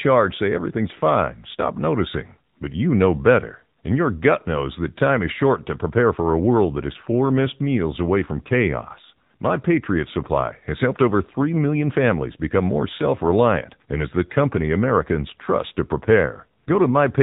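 From start to finish the speech sounds boxed-in and thin, with no air or sibilant sparkle, and carries a buzzy, synthetic edge that is plainly audible. That is the AMR narrowband mobile codec at work. Everything is carried at an 8 kHz sampling rate, so nothing above 4 kHz survives. Every 5 ms the voice is rebuilt from a vocal-tract model fed by a handful of pulses. The degree of buzziness fits a low mode around 7.4 kbps.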